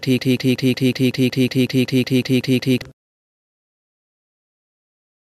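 From the very start until 2.82 s, a broken-record loop is already running: a 185 ms fragment repeats exactly, back to back, 14 times, likely because the player or stream stalled and kept resending its last buffer. The waveform shows identical blocks, and the spectrogram shows a striped, periodic pattern.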